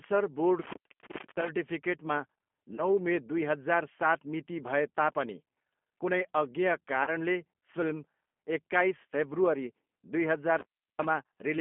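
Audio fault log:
Throughout, G.729 codec: The audio is held to a narrow 200 Hz to 3.4 kHz band, so it sounds boxed in and thin, with nothing bright above the cut-off. The coder rebuilds each 10 ms frame from a vocal tract filter, a pitch predictor and a handful of pulses rather than the actual waveform. That gives the speech its plainly audible rough, slightly synthetic grain, which fits an 8 kbit/s codec.
0.61–1.49 s and 10.59–11.05 s, intermittent contact: The line opens for about 645 ms in the first instance and about 342 ms in the second, and the sound drops away. A loose connection breaking and remaking makes crackle at each edge of the gap. While the circuit is open, the signal path carries no programme, so only faint residual noise remains until contact returns.
2.75–2.85 s and 7.04–7.10 s, VoIP packet loss concealed by the speech codec: At each point, 30 ms of audio goes missing, which points to a single lost packet. 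The decoder fills the hole by repeating its last pitch and filter settings at falling gain, so the sound smears into a brief buzzy tone or coloured noise that fades. Because each frame is predicted from the one before, the sound stays weak or distorted for a short while after real data resumes.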